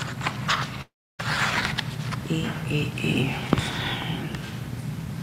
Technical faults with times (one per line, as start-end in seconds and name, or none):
0.00-5.22 sample clock jitter
0.81-1.21 long network dropout